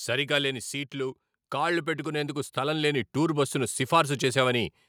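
From 0.05 to 0.98 s the automatic gain control judged the input too loud and pulled its gain down by about 5 dB. This automatic gain falling makes the speech start loud and then sink, with the background dropping right along with it.

From 0.91 to 4.47 s the gain control reverses, treating the input as too quiet and raising its gain by about 10 dB. This automatic gain rising is heard as a slow swell lasting over three seconds, with speech and background noise growing louder together.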